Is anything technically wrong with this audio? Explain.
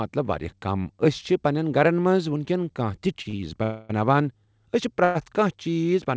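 Yes, there are a few stalls in this speech.

From 3.14 to 3.35 s there's a burst of repeated stalls (stutter): four short gaps, the longest about 38 ms, where late packets left the jitter buffer empty and the receiver stretched the last sound, about 90 ms in all. It drags and stutters, but nothing's lost.

Then there are two call audio freezes, at 3.63 to 3.91 s (263 ms) and 5.04 to 5.17 s (107 ms). The sound hangs as a fading buzz, never quite silent, then carries on from where it stopped. The likely cause is packets held up in transit, so each one pushes a gap into the audio.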